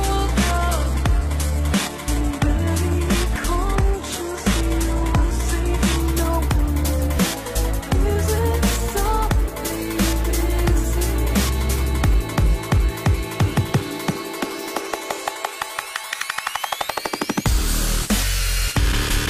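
From 0 to 6.0 s the sound has the thin, synthetic-sounding treble and heavier smearing of an adaptive stream starting at a low bitrate. Nothing is present above 12.3 kHz, consistent with roughly 16 kbit/s HE-AAC, before it jumps cleanly, with no gap, to a fuller AAC-LC-like quality near 96 kbit/s. That instant step up, rather than a dropout or gradual filtering, marks it.

Between 7.16 and 8.38 s playback slows by 6.07% and drops about 108 cents, then snaps back. From 16.89 to 18.39 s it speeds up 6.07% and rises about 102 cents. This is likely a drift correction step. A single held semitone shift, unlike wavering wow, identifies it.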